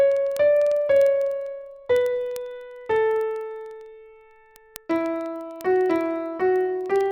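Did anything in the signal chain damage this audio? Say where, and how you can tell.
Yes. Word clock ticks run from 0.12 s to 7.11 s, at a steady rate of roughly one every 0.05 s, about 150 in all. The damage comes from a digital interface whose receiver is not locked to the sender's clock. The two clocks disagree by something like 400 ppm, so a single sample is repeatedly dropped or doubled. On a spectrogram these show as evenly spaced thin vertical broadband lines. In the waveform each is a one-sample step.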